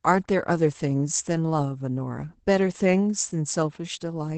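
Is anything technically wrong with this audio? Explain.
Yes. Opus voice compression runs through the whole speech clip. The band stops near 8 kHz, which points to SILK coding in wideband mode. Coarse excitation coding, consistent with roughly 12 kbps, makes the speech audibly muffled, hoarse and slightly robotic.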